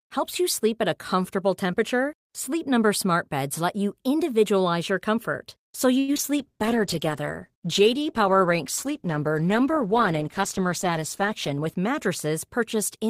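Repeated packet loss (robotic sound) from 5.99 to 6.26 s: four gaps, the longest 88 ms, were patched by extending the last sound, leaving a choppy stretch with pieces missing. A call bitrate drop from 6.38 to 11.73 s starved the encoder, which fits a fall from about 48 to 13 kbps, so the audio turns coarse, watery and dull. A jitter buffer speed-up from 11.21 to 12.27 s trimmed roughly 70 ms of pitch periods, so the speech runs at 107 % speed with unchanged pitch and sounds hurried.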